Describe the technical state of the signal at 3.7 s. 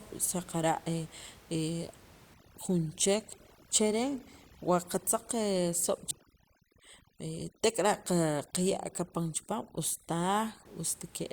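At 3.7 s the signal sits inside a stretch of overdone noise removal running from 2.34 to 10.65 s. The suppression is set so aggressively that any frequency band near the estimated noise floor is pulled far down or gated off, taking quiet speech detail with it. The room noise, about 26 dB below the speech, collapses into near silence with twinkling specks. A spectrogram shows scattered isolated dots between words and ragged, hollowed-out harmonics, while the waveform's pauses drop almost to flat.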